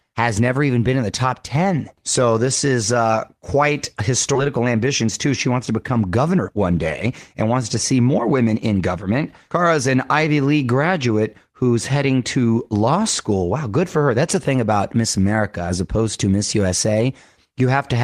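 At 4.35 s, just after "this is uh quite", the audio skips ahead: roughly a second of sound is dropped and the two sides are spliced together with no silence. Unlike a dropout, there is no gap, just an abrupt jump forward in the content.

From 4.47 s to 9.96 s a jitter buffer speed-up follows, as the receiver sheds the excess delay by repeatedly cutting out short pitch-period slices, about half a second in total. The sound runs at about 110% speed and feels hurried, but the pitch stays unchanged, which separates it from a sample-rate mismatch.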